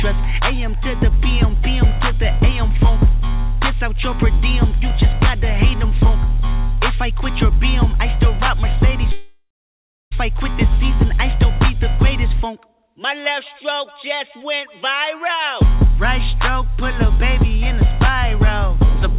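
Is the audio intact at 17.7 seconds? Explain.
Yes, the audio at 17.7 seconds is intact, with nothing at that moment beyond the narrow telephone-style band of the call path, which carries nothing above 4 kHz.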